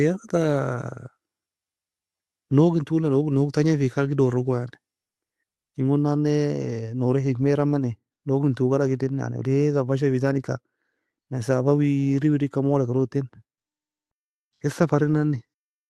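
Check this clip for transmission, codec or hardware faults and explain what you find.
No faults turn up anywhere in this clip.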